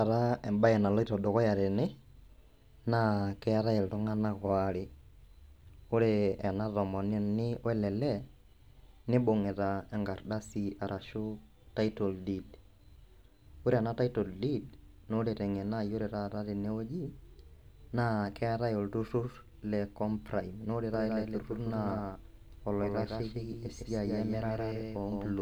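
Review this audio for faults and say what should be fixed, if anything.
A slower second capture path likely mixes the speech in again, creating a doubled audio track from 20.94 s to the end, trailing around 150 ms and about 5 dB quieter. Feed a single capture source to the mix and check edits for overlapping, out-of-step copies.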